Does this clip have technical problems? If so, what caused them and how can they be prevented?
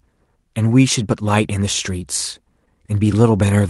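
Yes. Between 2.65 and 2.67 s there is short concealed packet loss: a brief smear in the speech where audio failed to reach the decoder in time. The receiver filled about 10 ms by extending the preceding sound, and roughly 10 ms more was simply lost before it blended back into the real signal. Unlike a buffer-underrun dropout, which leaves a hard silent gap or click, this gap is papered over with continued sound. A steadier network or a deeper jitter buffer would prevent it.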